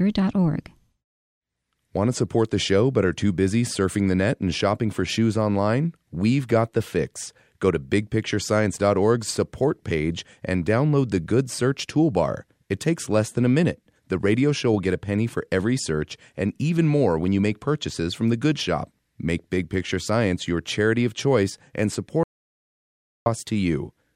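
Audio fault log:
22.23–23.26 s, audio dropout to silence: right after "charity of choice and", the speech stops dead mid-flow and the track falls to silence, with no room tone or background hiss at all, for about 1.03 s before the sound snaps back in. Whatever was said in that second is simply missing. The likely cause is a brief loss of the input signal, such as a device disconnect, a broken link or an accidental mute, while the recorder kept writing silence.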